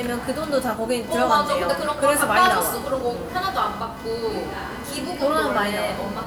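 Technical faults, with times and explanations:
Throughout: computer activity noise, a buzzy, chirping interference pulsing at roughly 500 Hz and sitting about 20 dB below the sound. Processor, graphics or mouse load shifts the shared ground of the audio circuit, so it tracks the computer's activity rather than the audio.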